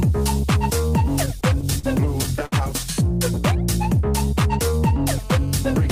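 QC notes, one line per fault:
1.25–1.85 s and 2.23–2.54 s, repeated stalls (stutter): The jitter buffer ran dry several times as packets arrived late or slower than playback. The first run has six short stalls, none longer than 42 ms, covering about 98 ms in total. The second has four, the longest 61 ms, covering about 89 ms, nearly a third of that span. The receiver held and extended the last sound through each wait instead of dropping anything, so nothing is lost, but the audio hitches and drags in both stretches.
5.09–5.91 s, GSM phone buzz: A hard, raspy buzz starts here and runs to the end, pitched at 217 Hz with a dense stack of harmonics. It sits about 27 dB below the wanted audio. A nearby 2G handset transmitting in bursts 217 times a second had its radio pulses rectified by the audio circuitry. Because the buzz stays steady once it begins, the handset was in an active call rather than a data transfer, and the buzz bears no relation to the programme audio.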